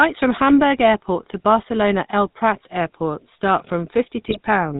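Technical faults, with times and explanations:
Throughout, GSM full-rate codec: the speech has a buzzy, gravelly roughness and nothing above 4 kHz. The vocal tract is modelled and driven by regularly spaced pulses that keep only every third excitation sample, which fits a 13 kbps full-rate stream, and the damage is plainly audible.
4.28 to 4.36 s, GSM bit errors: for about 80 ms the speech breaks into a squawking, gargling burst. Corrupted filter, pitch or gain values distort the spectrum and level of each affected frame, with a span that points to around four 20 ms frames being hit.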